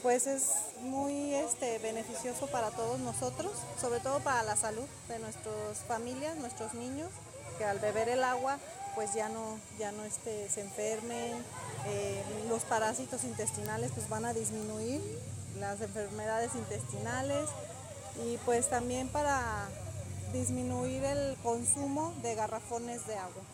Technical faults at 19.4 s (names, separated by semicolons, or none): word clock ticks